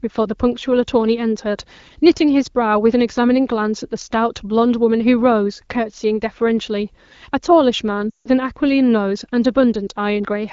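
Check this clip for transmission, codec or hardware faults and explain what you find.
One transmission fault stands out: lost AMR speech frames from 8.10 to 8.28 s, about 160 ms, which fits eight consecutive 20 ms frames failing their checksum. The decoder bridges the gap by reusing the last good pitch and vocal tract settings with falling gain, so the sound drops to near silence within two frames, as expected for wideband. That fading tail is what separates it from a hard packet dropout, which cuts off abruptly.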